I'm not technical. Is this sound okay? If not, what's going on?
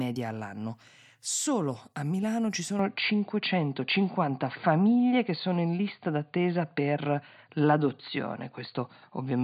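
No. From 2.79 s to the end, the speech suddenly turns duller and boxier with no gap, its loudness shifts slightly, and a faint new background noise appears. The likely cause is an input switched to a poorer device, one that cuts everything above 4.7 kHz.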